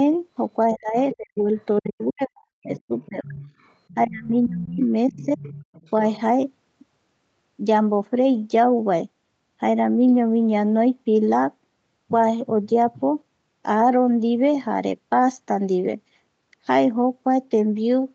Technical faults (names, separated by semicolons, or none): speech suppressed in double talk; other side's voice leaking through